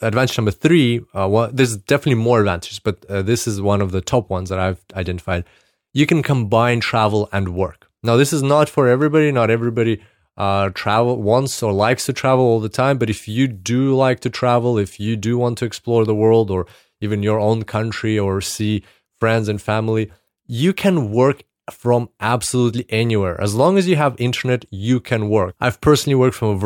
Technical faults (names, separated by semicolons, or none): resampler restarted on every block